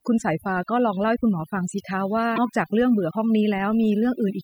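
Overdone noise removal runs through the whole clip. The noise reduction was set so aggressively that frequency bands near the estimated noise floor get pulled down or switched off, taking quiet parts of the speech with them. The background drops and breaks up into twinkling specks.

Damaged data in a compressed stream appears at 2.34 to 2.38 s. Corrupted bytes made the decoder misread the frames there and lose sync while it hunted for the next valid frame header, which produces a brief disturbance of about 40 ms.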